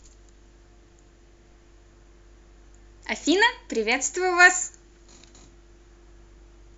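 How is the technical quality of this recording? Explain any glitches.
Nothing here gives me any technical trouble: I can't pick out a single glitch anywhere in the recording.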